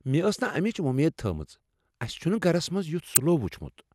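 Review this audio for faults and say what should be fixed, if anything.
A corrupt frame decoded appears at 3.14 to 3.17 s, just after "اَسِہ چُھنہٕ گَرس منٛز". Flipped bits inside one compressed frame made the decoder rebuild it with wrong gains or misread codes, so energy lands at unrelated frequencies for about one frame and peaks near -10 dBFS as a brief chirp, squeak, blip or burst of noise. Unlike a dropout or concealed lost packet, the speech isn't smeared. Instead, foreign sound replaces it. Add checksums so the receiver discards damaged frames before decoding.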